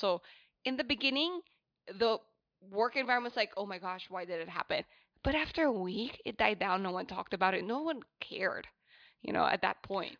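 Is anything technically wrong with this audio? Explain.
No, nothing technically wrong turns up in this speech recording, so there's no fault to point to here.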